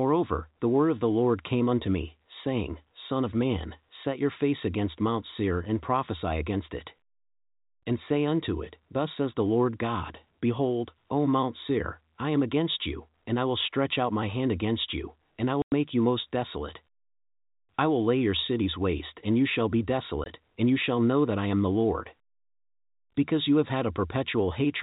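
At 15.62 to 15.72 s, between "against you and I" and "you most desolate", and again at 20.24 to 20.26 s after "and you shall be", packet loss filled with silence cuts hard 100 ms and 20 ms holes, consistent with 20 ms packets. Each appears as a flat-line waveform gap and a blank vertical band on the spectrogram.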